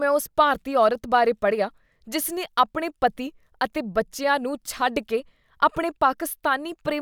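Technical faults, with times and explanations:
No technical faults can be heard in this speech clip.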